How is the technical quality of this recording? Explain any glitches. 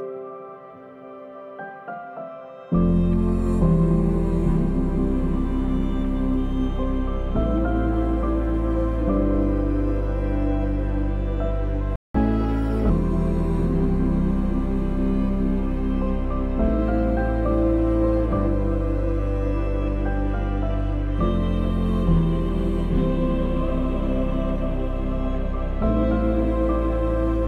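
There are two linked glitches around the 12-second mark. The rest of the recording is not assessed here.

At 11.96 s there's a playback stall. The sound cuts out mid-flow for about 188 ms, until 12.14 s, then resumes. The player most likely ran dry of data or had its thread blocked, so output went silent until it recovered.

From 12.14 to 12.90 s comes catch-up at higher speed. The player rushes through its backlog at 1.25x, resampling as it goes, so pitch jumps up by about four semitones. Then everything snaps back to normal speed once the lost time is recovered.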